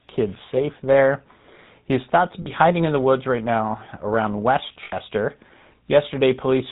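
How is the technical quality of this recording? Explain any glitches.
Quality's pretty rough. The whole thing has gone through the GSM full-rate codec, and there are two brief dropouts from lost GSM frames.

The GSM full-rate codec damage is plainly audible from start to finish. This codec models the vocal tract as a filter and drives it with a sparse, regularly spaced pulse train, so most of the fine excitation detail is thrown away. That's where the buzzy, gravelly grain on the voice comes from. Nothing above 4 kHz gets through, which leaves it dull and boxy. The character fits the 13 kbps full-rate coder.

The lost GSM frames show up twice. The first runs from 2.42 to 2.50 s, right after "is thought to" and before "hiding in the woods". It's about 40 ms, which fits two dropped 20 ms frames. The second runs from 4.84 to 4.93 s, just after "woods right now around", and lasts about 80 ms, or roughly four frames. 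In both cases the decoder fills the gap by reusing the last good frame's settings. You hear that as a short, rough metallic ring smeared over the gap instead of clean audio. Both gaps are too short to fade fully to silence.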